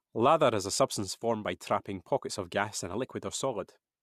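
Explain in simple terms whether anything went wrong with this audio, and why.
Nothing went wrong; the speech sounds as it should.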